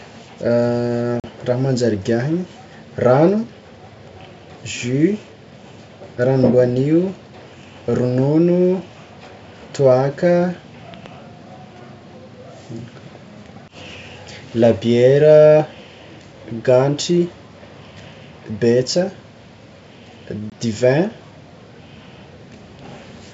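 At 1.20 s, packet loss on an ADPCM call cuts a 40 ms hole, fitting about two lost packets. The decoder's predictor loses step, so the speech resumes briefly distorted.

From 10.94 to 11.08 s, two loud pops sit a few dB above the speech, which continues underneath. A likely cause is a voltage spike from a plug or switch.

At 20.50 s, a second packet loss leaves a 20 ms gap, about one packet, with the same rough re-entry.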